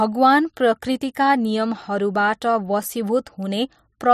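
Speech with overlapping chunks: a 12 ms slice replays at each join, about once per second (0.81, 1.82, 2.83 and 3.84 s), giving brief regular stutters.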